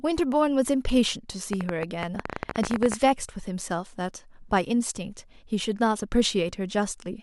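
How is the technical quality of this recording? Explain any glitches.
The recording has one clear glitch, a train of clicks running from 1.53 s to 2.95 s. About twenty sharp, similar pulses arrive at an uneven pace of roughly 16 per second, peaking around 15 dB above the speech, so they tick audibly over the talking and through any gaps. The likely cause is electrical interference from nearby equipment or a faulty connection or power supply. On a waveform they appear as thin spikes; on a spectrogram, as narrow vertical broadband stripes.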